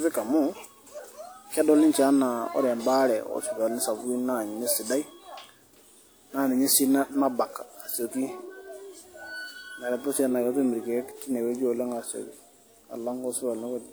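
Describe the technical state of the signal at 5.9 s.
At 5.9 s the speech sounds swirly and hollow, with a smeared, watery texture and softened consonant attacks, and nothing sits above about 20.1 kHz. This holds for the whole clip, not just that moment. It is generation loss, likely from the audio being decoded and re-encoded with WMA around seven times, which fits a 128 kbit/s chain. Each pass requantises on a shifted frame grid, so noise and spectral gaps pile up.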